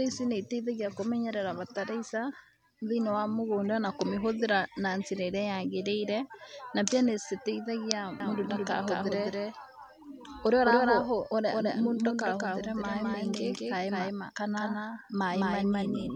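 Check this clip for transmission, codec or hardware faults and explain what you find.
A doubled audio track runs from 8.20 s to the end of the speech. From that point a second, full-band copy of the same audio sits roughly 200 ms behind the original at about the same level, with no reverberant tail or room colouring, and it cuts in abruptly rather than fading up. The likely cause is a second capture of the signal through a slower path, or an edit that left two out-of-step copies mixed together.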